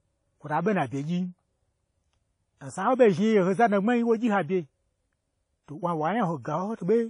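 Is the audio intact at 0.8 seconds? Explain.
No. Throughout the clip, including 0.8 s, nothing above 10.1 kHz survives. Unlike a single coarse encode, this is likely low-bitrate audio saved at a high bitrate, so the MP3 inherits those losses.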